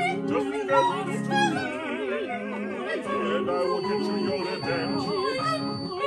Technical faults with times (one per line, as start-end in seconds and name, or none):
3.46-6.07 feedback whistle